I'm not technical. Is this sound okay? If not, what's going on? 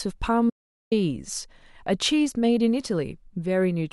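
No. At 0.50 seconds the speech cuts off abruptly and nothing returns until 0.92 seconds, so about 0.4 seconds is missing. This is an audio dropout to silence: the input was likely lost briefly, through a loose connection or a momentary mute, while recording carried on. A natural pause still has faint background hiss. This gap is completely dead, and the speech stops and restarts mid-flow, so whatever was said during it is gone.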